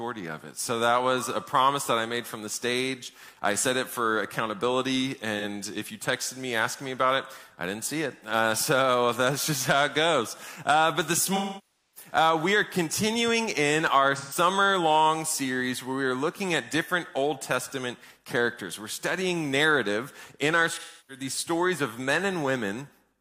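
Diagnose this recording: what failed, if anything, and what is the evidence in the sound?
Smeared, noisy or phasey patches at 5.39–5.44 s and 14.16–14.37 s, fading dips at 11.36–12.11 s and 20.77–21.24 s: codec-stage AAC frame loss with concealment extrapolating missing spectra.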